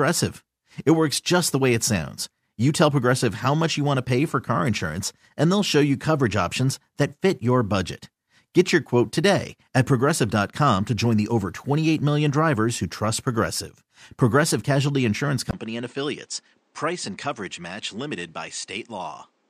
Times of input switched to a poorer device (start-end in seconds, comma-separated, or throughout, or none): 15.51-19.50